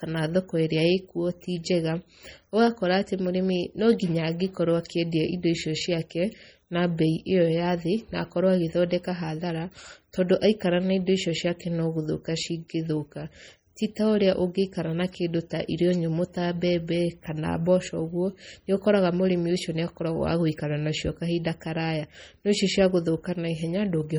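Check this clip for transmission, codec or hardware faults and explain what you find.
One codec fault runs through the whole recording. Likely MP3 compression at a heavily starved bitrate, which fits around 32 kbps: the encoder cut the treble at a fixed ceiling and dropped weak frequency lines that flicker between frames, so the speech sounds dull, watery and swirly, with metallic chirps on s sounds and smeared attacks.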